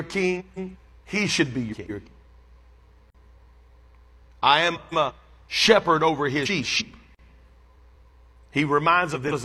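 Frames out of order appear first at 0.39 to 0.76 s. Two neighbouring blocks of about 170 ms each, consistent with runs of four codec frames, were decoded in swapped order, so this stretch of speech plays back-half-first. It sounds like a garbled flutter. No time goes missing. The same swap recurs at 1.71 to 2.08 s, just after "should be".

A gap between chunks follows at 3.10 to 3.15 s: a 44 ms hole where the stream, apparently delivered in 4-second chunks, left silence at a chunk boundary. The sound is interrupted there rather than lost.

Frames out of order return at 4.75 to 5.11 s, just before "shepherd over his", and again at 6.45 to 6.82 s, just after it. Each has the same exchanged halves.

A second 44 ms gap between chunks falls at 7.15 to 7.19 s, one chunk length after the first.

The last swapped-frame flutters occur at 7.78 to 8.13 s and at 9.14 s through the end of the clip.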